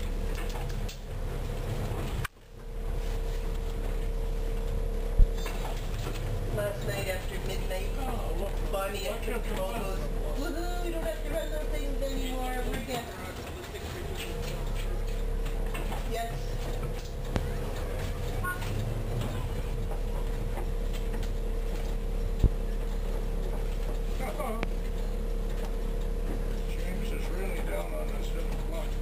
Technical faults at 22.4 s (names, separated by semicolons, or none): loud pop